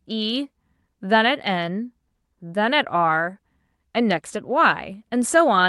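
Nothing in this speech recording stood out as a fault on listening.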